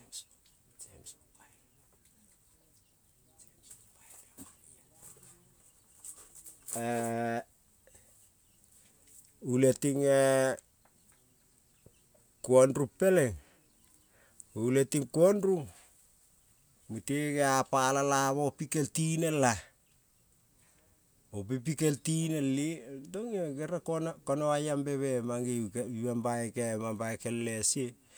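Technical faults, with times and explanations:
No technical faults are present; the speech signal stays continuous and stable throughout, with nothing in the recording or playback chain disturbing it.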